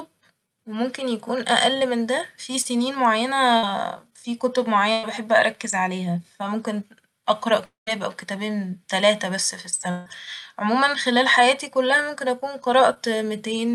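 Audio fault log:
2.61–2.67 s and 12.94–12.98 s, short concealed packet loss: a brief smear or wobble where the sound briefly blurs. About 40 ms and 20 ms of the call arrived too late, and the receiver bridged each gap by extending the preceding sound before blending back into the real audio.
3.57–3.65 s and 4.93–5.05 s, burst of packet loss: a short held buzz or fading hiss, then the audio picks up further along with a piece missing. Roughly 60 ms and then 100 ms of consecutive packets were lost, and the receiver stretched and faded the last sound across each gap.
7.65–7.89 s and 9.91–10.08 s, long network dropout: the sound stretches into a fading buzz or hiss, and at 7.65 s it drops to about 150 ms of silence before the audio resumes later on. About 220 ms and 160 ms never arrived, likely from a network stall.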